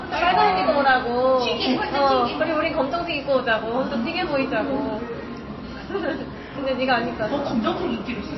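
From start to finish, nothing sounds above 5.8 kHz. The top end is sheared off flat. Codec damage is plainly audible throughout. Quiet detail swirls and bubbles, dropping in and out between frames. Sharp attacks blur, and bright parts chirp metallically. This is likely MP3 compression, starved of bits. The damage points to a very low bitrate, somewhere near 24 kbps. The encoder cut the treble and zeroed weak frequency lines to save space.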